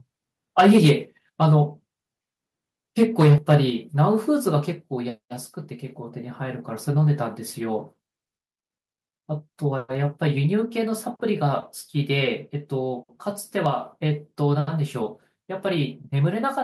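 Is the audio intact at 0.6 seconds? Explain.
No. From 0.58 to 0.91 s there is microphone overload: the input level was likely set too high, driving peaks about 7 dB past the converter's ceiling so their tops are sheared off. Around 7 percent of samples there are flattened, giving the loudest speech a harsh, crackling edge.

Right at 0.6 s, the microphone volume is stepped down. The call software likely detected that clipping and cut the device's input gain in a single move of about 2 dB, so speech and background both drop abruptly in level at that instant.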